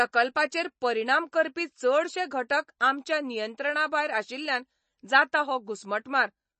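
From start to finish the speech sounds watery and swirly, with a metallic chirp on s sounds and consonant attacks softened and smeared, and nothing at all above about 8.3 kHz. The likely cause is MP3 compression. Short of bits, the encoder cuts the treble at a fixed frequency and drops weaker frequency lines, which then flicker on and off from frame to frame. Damage this plain fits a low bitrate of around 32 kbps.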